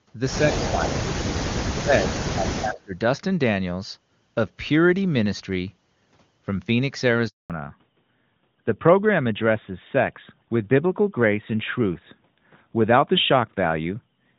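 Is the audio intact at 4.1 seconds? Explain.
Yes, the speech at 4.1 seconds is intact, with no dropout, click or other fault at that moment.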